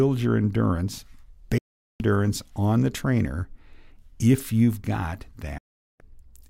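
Digital broadcast dropouts at 1.58 to 2.00 s, after "your endurance", and 5.58 to 6.00 s, after "if you've got": the receiver loses frames and snaps to silence within 3 ms, losing about 0.42 s each time.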